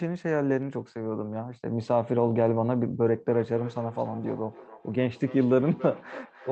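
From 3.06 s to the end, feedback echo between two devices returns the speech roughly every 0.3 s, peaking about 17 dB below it: a second device replays it and another microphone recaptures it.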